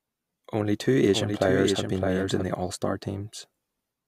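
From 1.09 s to 2.43 s a second copy of the speech runs underneath the first, trailing by roughly 0.7 s and sitting somewhat quieter. It is a clean, full-band duplicate with no reverberant tail or room colour, and it switches in and out abruptly at both ends. This is a doubled audio track, most likely the same signal reaching the mix twice, once through a slower capture path, so the two copies land out of step.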